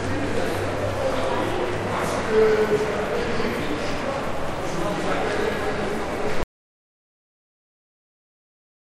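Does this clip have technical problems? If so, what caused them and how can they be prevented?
Yes. At 6.43 s the sound cuts out mid-flow into silence with no room tone, and it stays silent to the end of the clip. This is an audio dropout to silence, likely caused by the input being lost through a disconnected device, a failed link or a stray mute while the recorder kept writing silence. Securing connections, checking mute settings and monitoring input levels throughout the recording would prevent it.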